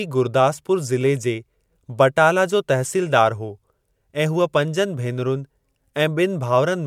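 No technical faults can be heard anywhere in the speech.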